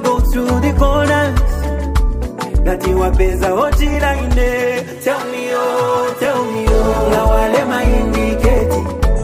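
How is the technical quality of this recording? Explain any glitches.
Quality is compromised by one recurring glitch. From 1.63 s to 8.57 s, about four clock drift buffer slips occur, spaced 2.31 s apart. Each is a short click. The likely cause is two mismatched clocks, off by roughly 700 ppm. A buffer slowly drifts, then drops or repeats roughly 70 samples.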